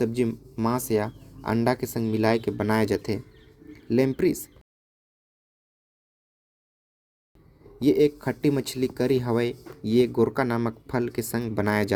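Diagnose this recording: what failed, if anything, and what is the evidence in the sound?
A rebuffering stall at the playback stage interrupts the speech from 4.61 s to 7.35 s. The player's buffer ran dry, so output stopped for about 2.74 s and then resumed exactly where it halted, adding time without losing any audio. The waveform shows a flat silent line and the spectrogram a blank full-band column.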